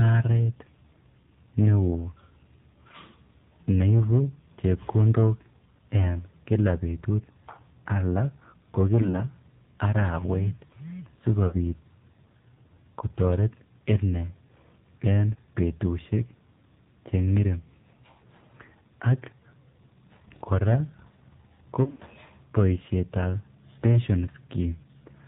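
The whole clip has AMR narrowband mobile codec damage: nothing above 4 kHz, and a buzzy, synthetic edge that fits a low rate around 7.4 kbps. Lost AMR speech frames come right after "al ko" at 9.02–9.20 s, at 11.48–11.57 s, and at 21.84–22.02 s just before "boisietab pension." The first, a single lost frame, is a brief dip or warble, the later ones are drawn out, and the last one smears and fades.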